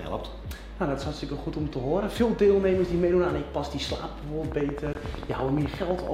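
At 4.52 s a train of clicks starts and runs to 6.08 s. It is about twenty sharp pulses at a steady 11.7 per second, peaking about 10 dB above the sound. Interference from nearby equipment is the likely cause. It ticks over everything.

At 4.93 s a gap opens at a join of encoded pieces. Two separately encoded pieces, in 6-second segments, were joined without trimming. The encoder's start delay and end padding stayed in. A 19 ms gap cuts the sound, with smeared edges, before it resumes.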